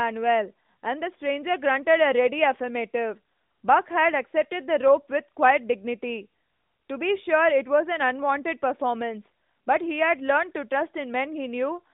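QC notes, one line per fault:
Nothing to flag here, just a normal narrowband mobile call at about 12.2 kbps, with the usual phone-line band topping out around 3.7 kHz.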